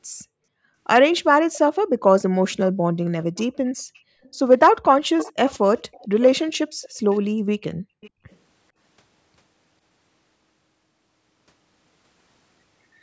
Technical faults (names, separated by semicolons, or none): echo leak